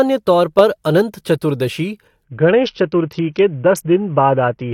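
At 2.24 s the speech suddenly turns dull and gritty and stays that way to the end at 4.74 s. This is a Bluetooth SBC bit pool drop: the link got congested and the encoder cut its bit budget, which points to a fall from a bit pool of about 31 to around 6, near 55 kbps. The top sub-bands are starved and the rest are coarsely quantised. A switch to a narrowband call profile would only lose treble cleanly. Here the treble loss comes with a rough, grainy noise.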